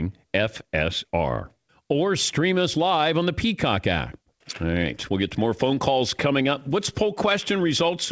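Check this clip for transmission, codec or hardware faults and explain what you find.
No faults found; the speech's band stops at 8 kHz, consistent with a WebRTC call path running a wideband codec such as G.722, and that ceiling is expected of the path, not a defect.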